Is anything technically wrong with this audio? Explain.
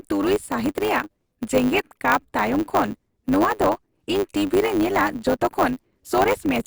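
Yes. Throughout the speech there is a steady 100 Hz buzz, and delivery runs about 1.07 times fast. This is a block size mismatch (truncated): blocks, consistent with 512 samples, arrive longer than the next stage reads, so each block's tail is discarded.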